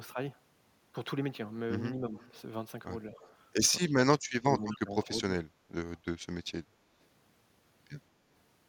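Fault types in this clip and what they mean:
Speech suppressed in double talk, at 1.94 to 2.14 s, 3.79 to 3.83 s and 4.18 to 5.34 s: the speech sags in level. The first dip is mild, a few dB. The brief second one drops about 20 dB. In the long third stretch it falls by up to about 35 dB. This is likely an echo canceller that, with both ends talking at once, could not separate the local talker from loudspeaker echo and turned both down.
Echo leak, at 2.16 to 2.31 s, 3.13 to 3.34 s and 4.72 to 4.79 s: short, faint delayed copies of the speech arrive about 217 ms behind the original. They sit roughly 30 dB below it, rising to about 25 dB down in the last scrap. The likely cause is a loudspeaker at the other end whose echo canceller left part of what its microphone picked up in place, so that leftover echo came back down the line.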